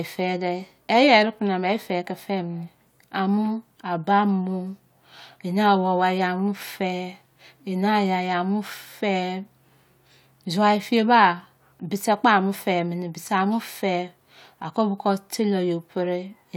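No technical faults can be heard anywhere in this speech recording, and the signal holds steady throughout.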